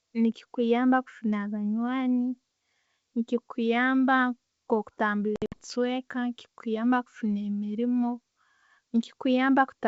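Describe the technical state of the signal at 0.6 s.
At 0.6 s the speech is intact, passing through G.722 wideband telephone coding at 64 kbit/s with no fault at that moment.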